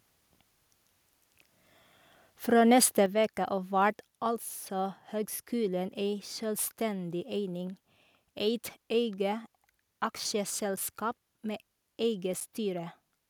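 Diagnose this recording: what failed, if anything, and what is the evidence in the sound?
At the call-processing stage, the microphone volume stepped down, likely because the software judged the input too loud and cut the device gain. At 3.06 s, speech and background drop together by about 6 dB in one abrupt step, just before "veke av vert altså".

At the driver or buffer stage, there are blocks of digital silence: most likely the output buffer was not filled in time, so zeros went out instead of audio. At 10.76 s and 12.40 s the sound cuts to silence for 8 ms and returns with no fade, heard as short ticks.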